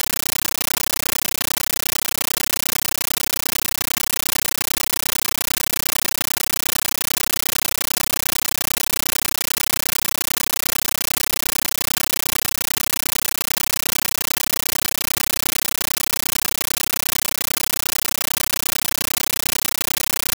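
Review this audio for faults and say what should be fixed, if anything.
Compressed stream played as audio throughout: an undecoded AC-3 bitstream is treated as samples, producing loud chattering static of 13.3 ms noise bursts 31.25 times a second. Either decode Dolby Digital at the receiving end or set the source to output PCM, so the bitstream is never played as raw audio.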